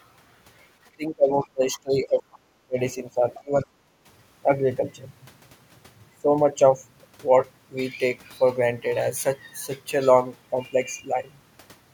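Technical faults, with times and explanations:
0.96–2.49 s, 2.65–2.79 s and 3.40–3.69 s: speech suppressed in double talk. The talker's level sinks steeply, by some 25 to 30 dB at its deepest. The likely cause is the echo canceller mistaking simultaneous far-end talk for echo and attenuating everything. On a spectrogram, the harmonics and high-frequency energy fade or break into gaps. The waveform envelope collapses abruptly, longest across the first span, then recovers.
1.74–1.80 s and 3.34–3.41 s: other side's voice leaking through. Brief scraps of a second voice appear, faint, around 25 dB below the talker. This is likely residual loudspeaker sound that the echo canceller failed to subtract from the microphone signal. Each fragment lasts under a tenth of a second. On a spectrogram it shows as a weak, separate harmonic pattern overlapping the main voice. The waveform shows only a small ripple of added energy.
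3.97–4.05 s: background gated by the echo canceller. Room tone dips by about 7 dB for roughly 70 ms and then returns, because the canceller clamped the microphone down while the loudspeaker was active. It is heard as a momentary hollow in the ambience. On a spectrogram the broadband noise floor lightens in a narrow vertical band. The waveform's low-level noise shrinks briefly and then resumes its previous amplitude.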